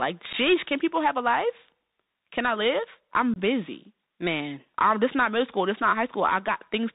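A Bluetooth CVSD headset codec runs through this whole speech recording, and it sounds like a 64 kbps CVSD link. The one-bit slope coder passes nothing above 4 kHz, so s sounds turn scratchy, loud bright peaks outrun the adapting step and distort, and a granular hiss sits under the voice. Unconcealed Bluetooth headset packet loss opens short holes at 0.33 s, lasting about 11 ms, and at 3.34 s, lasting about 22 ms. A few voice packets and then several more went missing and were replaced by silence or an idle pattern, so each gap has abrupt edges and the speech returns briefly quieter.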